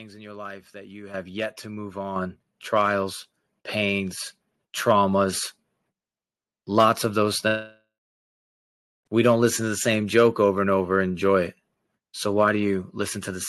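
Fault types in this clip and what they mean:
Microphone volume stepped up: the call software judged the input too quiet and raised the microphone's input volume in single jumps, so the voice and the background noise both get louder at the same instant. Three steps are heard, at 1.14 s, 2.16 s and 3.18 s, of about 9 dB, about 6 dB and about 1 dB. Each is an abrupt lift in level.
Long network dropout: from 7.47 s to 9.07 s, about 1.6 s of audio never reaches the listener, most likely because packets were lost on the network. The receiver first stretches out the last sound it had into a fading buzz. After that comes roughly 1.2 s of near silence. The speech then resumes further along, and the missing stretch is simply absent, carried over the Opus call path with its band limit near 12 kHz.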